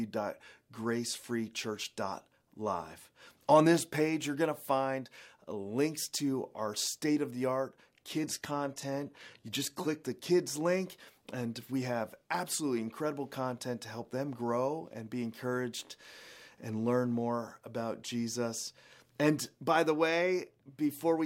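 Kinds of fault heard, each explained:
Adaptive stream at a lower bitrate: from 8.04 to 10.04 s the treble suddenly thins and turns synthetic, with swirly artefacts, then snaps back without a gap. The player briefly switched to a much lower-bitrate version, which fits a step from 96 to 20 kbit/s.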